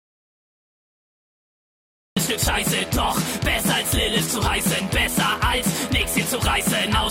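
The audio opens in dead silence, with no room tone at all, until it comes in abruptly at 2.17 s. This audio dropout to silence is likely due to the input being lost, through a disconnected device, a failed link or a mute, while silence kept being written.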